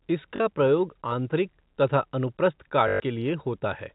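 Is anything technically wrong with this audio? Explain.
Yes. Two dropouts are concealed by packet loss with last packet repeated. The first runs from 0.36 to 0.40 s, just before "प्रयोग आंतरिक तथा अनुप्रस्थ". The second, longer one runs from 2.88 to 3.00 s, right after those same words. When audio went missing, the receiver looped the last good chunk. The 40 ms and 120 ms gaps fit two and six 20 ms packets. The loops ignore the pitch cycle, and the 120 ms run buzzes at about 50 Hz like a brief robotic stutter. In the waveform, identical blocks repeat with step jumps at each join. In the spectrogram, evenly spaced vertical stripes cross the band-limited telephone spectrum, which stops at 4 kHz as G.711 A-law coding does.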